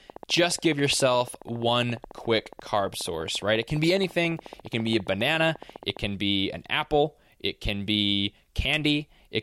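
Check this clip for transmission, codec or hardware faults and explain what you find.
One hardware-type fault is present: a train of clicks running from 0.10 s to 5.98 s. The likely cause is interference from nearby equipment or a faulty connection or power supply injecting a pulse into the signal path at a steady rate of 14.5 per second. That produces about a hundred near-identical clicks, evenly spaced and peaking around 5 dB above the speech, so they tick audibly over the talking and through the pauses until the train stops.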